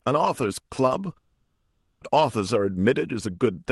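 From 1.17 s to 2.03 s the audio breaks off in what is likely a long network dropout: about 840 ms of signal never arrives. The receiver bridges the gap by extending the last sound as a decaying buzz, which gives way to roughly 170 ms of near-silence before the speech resumes with the lost portion simply gone. Around the gap, the call path adds its coding noise and limits the top end to about 12 kHz.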